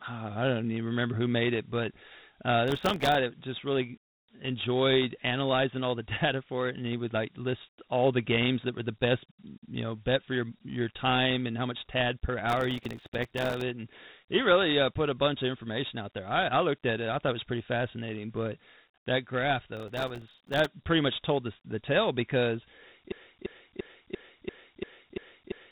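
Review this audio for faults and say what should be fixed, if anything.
The whole clip carries Dialogic VOX ADPCM coding. Nothing is heard above 3.9 kHz, and a gritty hiss clings to the speech, which fits 4-bit ADPCM at 32 kbps rather than simple band-limiting. Storing or transmitting in 16-bit PCM or a wideband codec would prevent it.

Processor overload crackle tears the sound at 2.68–3.15 s, 12.49–13.61 s and 19.77–20.66 s. Each burst is many tiny silent gaps, a millisecond or two each, rather than one clean dropout. Larger audio buffers or a lighter processing load would prevent it.

A broken-record loop runs from 23.12 s to the end. The same 0.34 s fragment repeats exactly, eight times back to back, unlike an echo, which decays. It is likely a stalled stream resending its last fragment. Detecting stalls and muting instead of repeating would prevent it.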